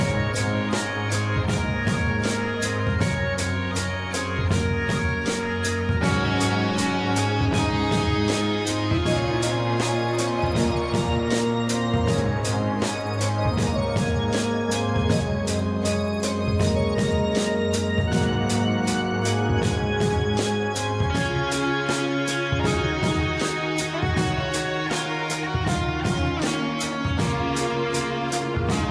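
Nothing stood out as a technical fault anywhere in the recording when listening through it.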